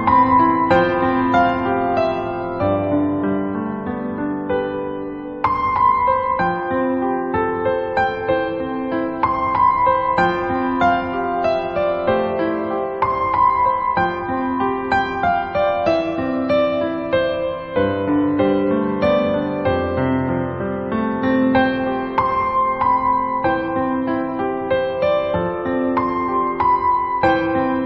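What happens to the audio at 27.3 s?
Nothing goes wrong at 27.3 s; the audio plays through that moment intact, with no dropout, click, distortion or other fault.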